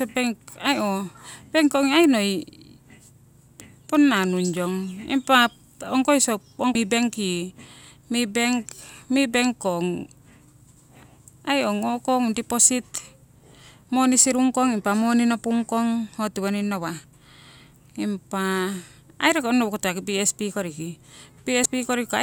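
Damaged data in a compressed stream appears twice in this speech, at 6.72 to 6.75 s and again at 21.63 to 21.66 s. Each time a stretch of corrupted frames throws the decoder out of sync, and it lurches forward to the next valid frame header, leaving a brief glitch.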